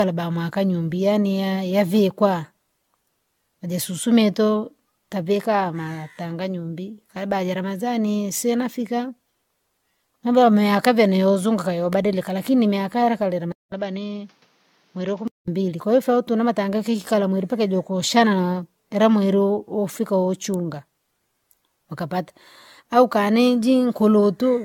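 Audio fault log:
throughout: generation loss. Swirly, hollow, smeared sound with blurred attacks, likely from repeated AAC-LC re-encoding at 96 kbit/s; the spectrogram shows patchy holes and smeared transients.
11.93 s and 20.54 s: electrical switching spike. Sharp snaps on top of the speech, the first just after "mambo yame yakavene youzunguka", likely from a nearby electrical arc; each is a thin vertical spike.
13.52–15.48 s: input switched to a poorer device. After "lakini imiakaleka" a 0.2 s silence, then duller, boxier sound about 5 dB quieter with new faint noise and nothing above 7.1 kHz, likely from a poorer microphone, until "mbili kwahiyo ufaa utune". The spectrogram shows a gap, then a flat ceiling.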